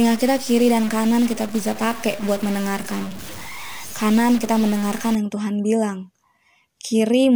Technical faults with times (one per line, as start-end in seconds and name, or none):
0.00-5.15 stuck bit